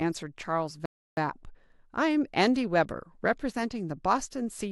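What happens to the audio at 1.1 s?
At 1.1 s the speech is inside a playback stall that runs from 0.86 to 1.17 s, a gap of about 0.32 s. The sound breaks off mid-flow and the output goes dead silent before resuming, most likely because the player ran short of buffered data or its thread was briefly blocked. On a waveform this shows as a flat, near-silent stretch between abrupt edges; a spectrogram shows a clean vertical blank band across all frequencies.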